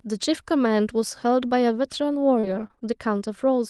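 From 2.39 to 2.89 s the speech turns choppy and robotic: repeated packet loss leaves short holes, the longest 36 ms, each patched by extending preceding sound.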